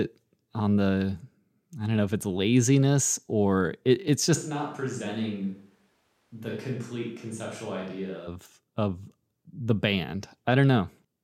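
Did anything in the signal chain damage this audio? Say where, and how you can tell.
Yes. From 4.37 to 8.26 s, right after "laziness or it it's", the speech turns suddenly roomy and thin, roughly 10 dB quieter, with more background noise, then snaps back before "of the". This is likely a switch to a distant microphone at the capture stage, after the close microphone's feed dropped out.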